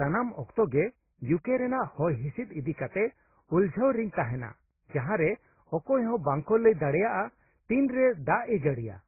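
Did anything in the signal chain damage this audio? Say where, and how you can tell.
Yes. At the codec stage, the speech appears to have been encoded by one lossy codec and then re-encoded by another, most likely transcoding between lossy codecs, with a very low-rate AAC-type stage followed by Opus. From start to finish nothing remains above 2.6 kHz, the lowest cut-off in the chain, which persists through every later stage. The second encoder then spends its bits reproducing those earlier artefacts and adds its own, so two kinds of coding damage are heard together.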